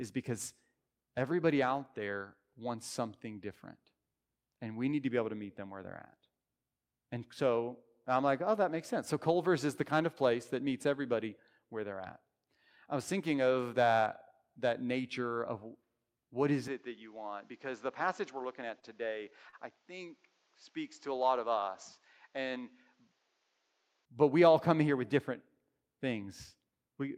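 At 16.68 s, right after "what is", the speech turns duller and a few decibels quieter with no gap, losing everything above 7.6 kHz and gaining a faint new background noise well below the voice. It stays that way until 24.05 s, just before "but we all come". This is likely an input switched to a poorer device, a narrower-band microphone or headset path with its own tone, level and noise, before the original input returns.

Inside that stretch, at 18.79 s and again at 19.49 s, a sound is briefly held too long, for 31 ms and then 36 ms, before the speech picks up exactly where it left off and nothing is lost. Each is a short stall from a late packet. The jitter buffer ran dry, so the receiver stretched the last audio until the delayed data arrived, adding that much delay each time.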